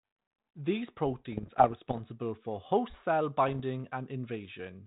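From 1.32 to 1.99 s, just before "for host cell", bit errors on an ADPCM link give pops and rough, gravelly bursts with jumpy level. Each flipped bit throws the decoder's step size and predictor off, so the damage rings on briefly. It recurs from 3.48 to 3.60 s right after "for host cell". The error rate sounds like roughly half a percent, over a lightly coloured G.726 path that fits 32 kbit/s.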